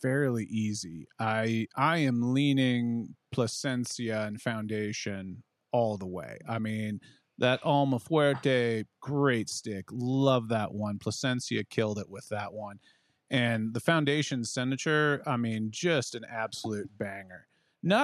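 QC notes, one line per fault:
No technical faults are detected anywhere in this speech recording; the signal holds steady, with no dropouts, distortion or discontinuities at any point.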